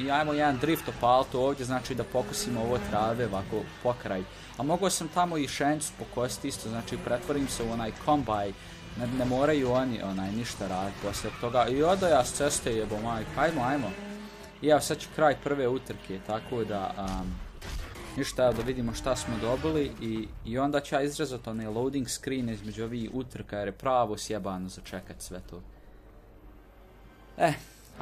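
No technical faults can be heard anywhere here.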